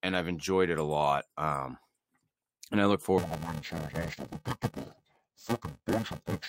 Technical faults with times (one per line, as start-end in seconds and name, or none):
3.18-6.49 interleaved audio read as planar